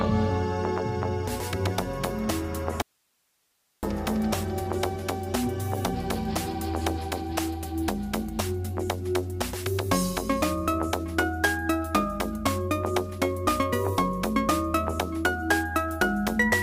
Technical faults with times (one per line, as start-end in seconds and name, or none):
2.82-3.83 audio dropout to a faint residue